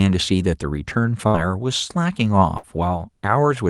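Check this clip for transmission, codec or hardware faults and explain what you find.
The clip has two bursts of packet loss, at 1.27 to 1.36 s and at 2.58 to 2.65 s. Each time the receiver stretches and fades the last sound for about 60 ms, then resumes with about 60 ms of speech skipped. Unlike a plain dropout to silence, the gap is filled with a held buzz or fading hiss.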